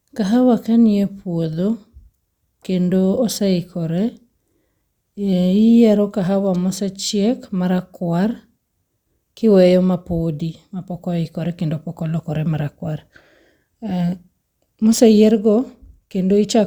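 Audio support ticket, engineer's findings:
Listened through the whole speech clip and found nothing wrong with it, so there's nothing to chase on this ticket.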